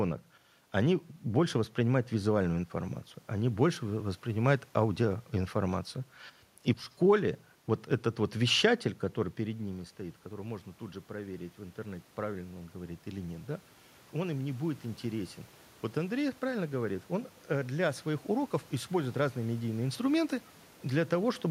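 Around 9.0 s the talker drifts away from the mic and the level drops by about 13 dB. Right after "этот вот вещатель который", from 9.38 s until 19.97 s, you can hear automatic gain rising: the AGC decides the input has gone quiet and slowly winds its gain up by about 9 dB. The voice creeps back louder, and the room noise swells right along with it, so the background gets more present.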